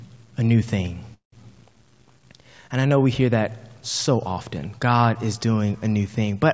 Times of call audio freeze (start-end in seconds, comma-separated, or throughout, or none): 1.14-1.34